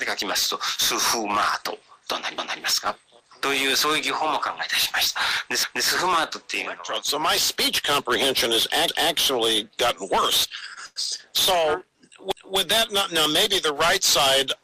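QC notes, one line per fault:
2.38–2.63 s, 5.63–5.88 s, 8.88–9.13 s, 12.32–12.57 s, overlapping chunks: at each join between 3 s chunks, the next chunk begins 250 ms before the previous one finished, so that quarter-second of audio plays twice. The result is a stutter with a click at the seam. On the waveform, the 250 ms stretch appears twice back to back with a discontinuity at the seam. On the spectrogram, the same pattern repeats and a vertical broadband line marks each join.
10.49–11.20 s, repeated stalls (stutter): the receive buffer ran dry five times in quick succession. Each time, the receiver stretched the last sound to cover the wait, 171 ms in total, with the longest gap at 100 ms. Nothing is lost, but about a quarter of this span is filled sound, so it drags and stammers. The spectrogram shows short smeared, frozen patches at five points, and the waveform shows held stretches of the previous cycle, tapering where the gap is longest.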